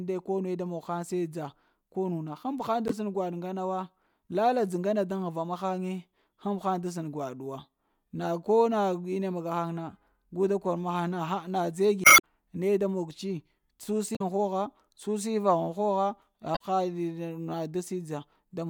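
A speech recording with four short disruptions from damaged data in the compressed stream. They fall at 2.88 to 2.92 s, 12.01 to 12.24 s, 14.13 to 14.21 s and 16.53 to 16.61 s. The longest is the second, at about 0.23 s. Each is a brief glitch cutting into the speech. Corrupt bytes in the file break the frames there. The decoder misreads them, loses sync, and must find the next valid frame.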